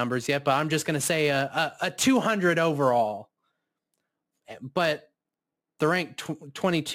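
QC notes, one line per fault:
Throughout: crude rate conversion. A gritty, inharmonic fizz rides on the speech, loudest on sibilants and louder syllables. Samples have been dropped or repeated by nearest-neighbour picking with no filtering. The pattern fits a 48 kHz to 44.1 kHz change. The timing errors recur in a fixed cycle set by that ratio, creating shifted, inharmonic copies of the speech. The error sits roughly 25 dB below the signal, so it follows the speech's level.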